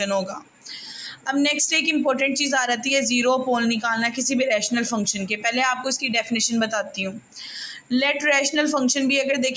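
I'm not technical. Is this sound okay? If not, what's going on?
No. A noise suppressor built for speech was left running on this audio, the fault called noise suppressor applied to music or sounds. It mistakes steady tones and lingering sound for noise, so throughout the clip the level keeps dipping and recovering, giving a pumping, fluttering or thinned-out feel.

There are also three moments of sound cut by the noise suppressor, where it turned things down much harder: from 0.29 to 1.28 seconds, 6.87 to 7.41 seconds, and 7.73 to 7.91 seconds. Held or fading sound sinks sharply there or its tail gets clipped short.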